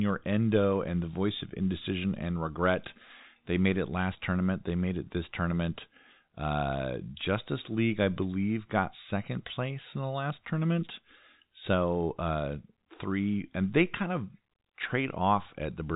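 No technical faults can be heard in this speech.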